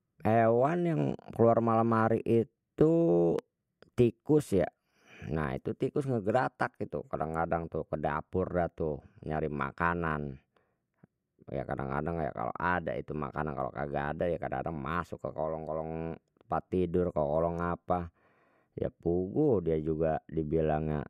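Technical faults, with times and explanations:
3.39 to 3.41 s, loud pop: a single sharp pop lands on top of the speech, peaking a few decibels above the surrounding level, while the talking carries straight on underneath without a break. A brief, abrupt jump in voltage of this kind is likely from a plug, switch, static discharge or driver glitch; the circuits downstream smooth that step into a short pulse, which the ear hears as a crisp pop rather than a gap.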